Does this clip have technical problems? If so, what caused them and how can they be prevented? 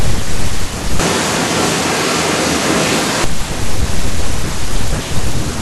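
Yes. From 1.00 to 3.24 s the speech suddenly turns roomy and hollow, thinner in the bass and about 5 dB quieter. Room noise rises to roughly 30 dB below the speech, then the sound snaps back. This is likely a switch to a distant microphone: the close mic's signal dropped out and a farther pickup filled in. To prevent it, monitor the close mic on headphones during recording and secure its cable, connector and battery so it cannot cut out mid-take.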